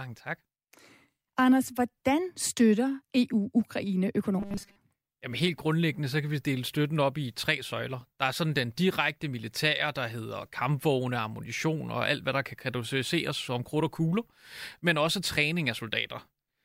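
From 4.40 to 4.78 s the speech becomes a rigid, metallic buzz at 200 Hz. It still roughly follows the words. This is robotic sound from repeated short buffers. Audio likely arrived too seldom, so a 5 ms chunk was looped for most of that stretch.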